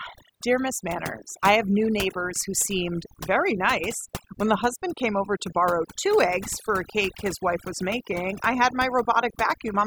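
Across the whole clip the background sits at near silence, dotted with twinkling specks. This is overdone noise removal: a noise reduction process was pushed too hard on a noisy recording, so individual frequency bands that came close to its noise estimate were cut deeply or switched off entirely. Quieter parts of the speech fell below that threshold and were stripped away along with the noise, leaving gaps in the spectrum.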